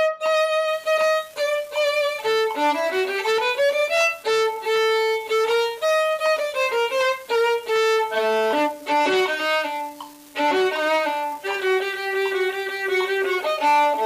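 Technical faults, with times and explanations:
0.68–14.06 s, unreliable data bit: A steady crackle or fizz starts at 0.68 s and runs to the end. It does not stop in the pauses. One data line is marginal, so its bit flips in a random share of samples. Each flip shifts the sample by the same fixed step, about -32 dBFS. The result is a stream of equal-sized spikes scattered at random. The ear hears this as constant grainy noise laid over the sound.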